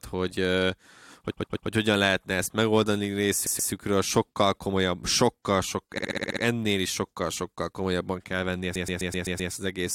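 Speech with repeated frames at 1.30–1.68 s (before "hogyan lehetne ezt megoldani"), 3.46–3.71 s, 5.97–6.42 s (before "is sokkal sokkal") and 8.75–9.51 s. The same 128 ms block replays two to six extra times, or a 64 ms block seven extra times at 5.97 s. Each is heard as a stutter. Unlike a dropout, nothing is lost; the audio is lengthened instead.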